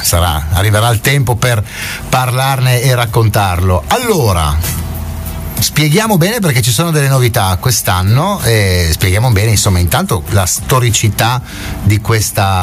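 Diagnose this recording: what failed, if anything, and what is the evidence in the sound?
What's failed here is gain pumping, and it runs the whole length of the clip. The level swings by roughly 15 dB. Loud and soft passages end up squashed close together. The likely cause is input gain set far too high, with a fast limiter or compressor in the processing chain yanking the level down on every peak and releasing it in the gaps.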